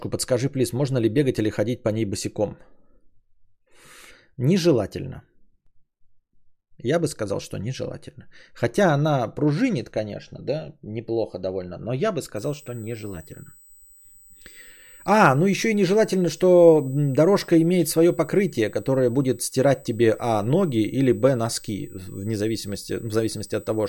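From 12.36 s to the end, a thin, steady whine sits behind the speech at 8 kHz, strongest at 16 kHz and roughly 30 dB below the speech. This is USB whine: the bus draws current in 125-microsecond microframes, and that pulsing leaks in through power or ground.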